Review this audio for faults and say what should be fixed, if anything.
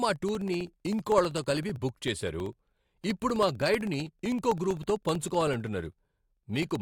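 Periodic USB or driver dropouts from 0.09 to 6.76 s: every 64 ms a stalled driver drops about a millisecond to silence. These show as tiny regular waveform gaps and thin vertical spectrogram lines. To prevent it, stop the background task or driver that blocks the USB bus at that fixed interval, or move the interface to a less congested USB controller.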